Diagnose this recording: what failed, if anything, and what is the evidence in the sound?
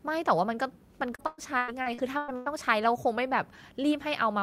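Network stage: repeated packet loss (robotic sound), 1.15–2.48 s. Seven gaps up to 112 ms, each patched by extending prior audio, leave the speech choppy.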